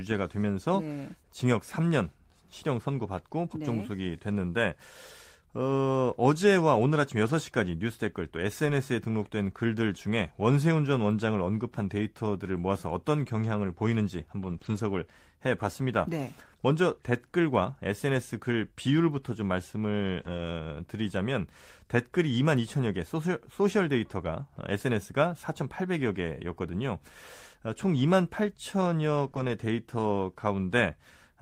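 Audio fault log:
7.25–7.31 s, lost packet rebuilt from error correction: about 40 ms of speech, fitting two lost 20 ms packets, is played from the lower-bitrate backup copy, so it is rougher and noisier with no gap.
8.65–8.67 s, lost packet rebuilt from error correction: one 20 ms stretch decoded from the redundant low-bitrate copy carried in the next packet, giving a brief grainy patch rather than silence.
14.41–14.55 s, lost packet rebuilt from error correction: 80 ms, fitting four lost packets, rebuilt from the embedded backup data, so the speech turns coarse and noisy for that span.
14.57–14.61 s, short concealed packet loss: 20 ms never arrived and had no backup, so the decoder extended the preceding sound, giving a short smear or wobble.
14.61–14.79 s, lost packet rebuilt from error correction: a further 100 ms, fitting five lost packets, played from the low-bitrate copies, prolonging the rough, noisy texture after the concealed gap.
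20.21–20.39 s, lost packet rebuilt from error correction: 100 ms of speech, fitting five dropped packets, decoded from the in-band backup copies, so it sounds degraded and hissy but continuous.
29.27–29.29 s, lost packet rebuilt from error correction: a single 20 ms frame restored from the following packet's reduced-quality copy, heard as a momentary roughness.
29.31–29.35 s, short concealed packet loss: a 20 ms hole with no redundant copy was filled by continuing the last sound, leaving a brief smear or wobble.
29.35–29.49 s, lost packet rebuilt from error correction: 80 ms, fitting four lost packets, rebuilt from low-bitrate backups, so the speech stays rough and noisy through this stretch.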